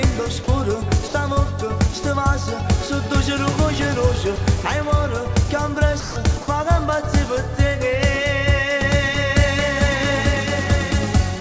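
The sender's voice detector likely judged parts of the signal to be background and stopped transmitting, so the receiver filled those gaps with comfort noise: sound dropped by the voice detector. The audio gives way to steady noise or near silence at 1.08–1.14 s (60 ms), 4.36–4.38 s (20 ms), 6.00–6.16 s (160 ms), 6.42–6.48 s (60 ms) and 11.40 s (11 ms), then returns, except after the last gap, which runs to the end of the clip. The call path's G.722 coding leaves nothing above 8 kHz.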